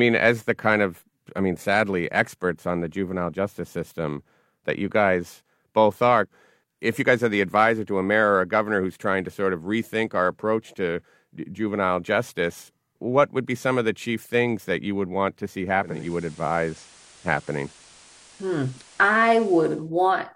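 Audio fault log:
15.78–19.91 s, digital radio blending to analogue: over a 351 ms cross-fade the speech shifts in level by about 2 dB and gains a hiss roughly 30 dB down, as the receiver drops digital for the FM broadcast, then returns.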